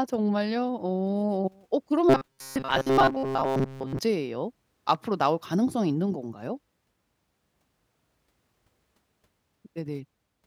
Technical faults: robotic sound from repeated short buffers

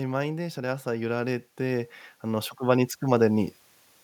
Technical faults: automatic gain rising

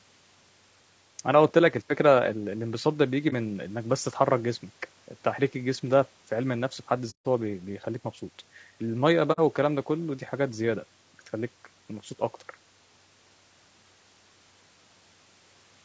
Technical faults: low-delay AAC compression; AAC frame loss with muting

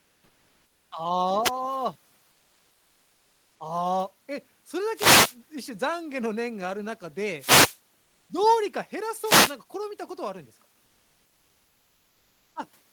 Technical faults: comfort noise in place of the background; wireless microphone noise hit

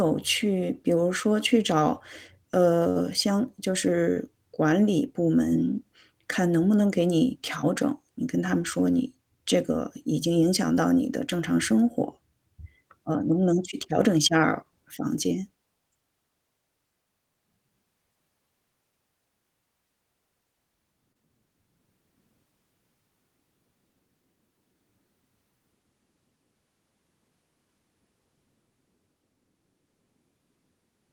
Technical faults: short concealed packet loss

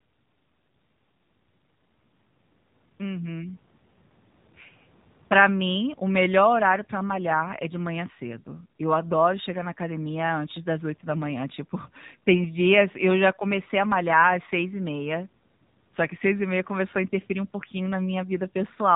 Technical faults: AMR narrowband mobile codec

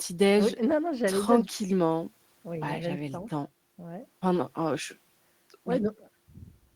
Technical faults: none

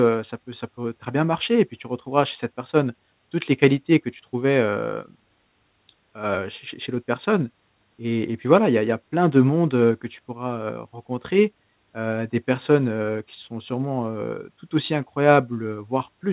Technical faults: none

